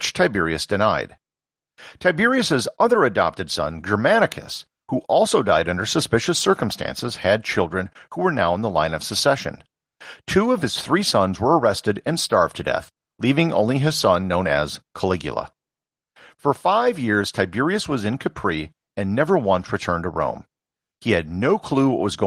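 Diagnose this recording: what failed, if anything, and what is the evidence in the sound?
Nothing failed in this recording.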